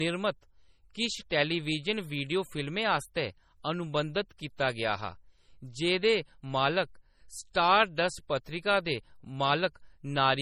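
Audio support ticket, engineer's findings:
Speech has low-bitrate MP3 smear and swirly artefacts for the whole clip, though the band runs up to about 20.1 kHz. Likely low-bitrate audio saved at a high bitrate: a roughly 32 kbit/s encode re-encoded near 256 kbit/s, which can't restore the damage.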